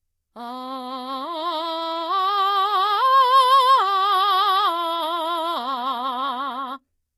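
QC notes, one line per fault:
Throughout, HE-AAC compression: the damage is plainly audible. The top end stops dead at 14.9 kHz, and the treble below that sounds rebuilt rather than real, with gritty, metallic highs that don't line up with the music beneath. That's likely spectral band replication at a low bitrate, something like 20 kbps.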